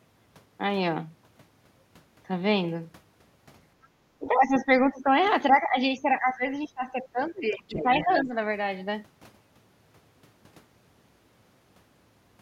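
A speech recording with speech suppressed in double talk in three stretches: 4.19 to 5.14 s, 5.5 to 5.77 s, and 6.02 to 8.35 s. The talker's level sinks by about 15 dB in the first and last stretches and about 10 dB in the middle one, with the longest stretch losing well over a second of audio in pieces. This is likely an echo canceller that could not tell the talker apart from incoming far-end sound and ducked everything. On a waveform the envelope pinches in abruptly; a spectrogram shows the upper harmonics fading and the energy breaking into patches. From 7.52 to 8.22 s a second voice, the other side's voice leaking through, sits about 10 dB under the talker, probably loudspeaker pickup that the canceller left unremoved. It appears on the spectrogram as a faint, separate harmonic pattern overlapping the suppressed region.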